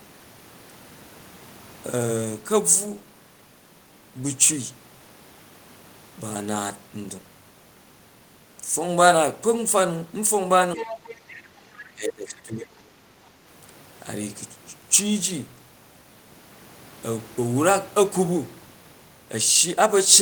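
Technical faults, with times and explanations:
10.75–10.84 s, speech suppressed in double talk: The speech dips slightly, by a few decibels, for about a tenth of a second. The other side starts talking here. The echo canceller likely could not tell the two apart and turned both down.
10.78–11.44 s, other side's voice leaking through: A second voice comes through faintly, well below the main speech. It likely plays from the loudspeaker and reaches the microphone. The echo canceller left part of it in.
11.76–11.84 s, other side's voice leaking through: A short scrap of the second voice returns, now much fainter. This is likely leftover loudspeaker echo the canceller missed.
11.95–12.71 s, speech suppressed in double talk: The speech drops by up to about 15 dB over most of this stretch and sounds held down. Both sides overlap again. The canceller likely treated the talker's speech as echo and suppressed it.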